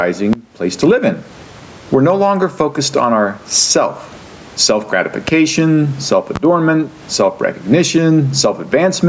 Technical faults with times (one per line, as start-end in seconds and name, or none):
0.00-9.08 gain pumping
0.33-0.37 loud pop
5.28-5.32 loud pop
6.36-6.39 loud pop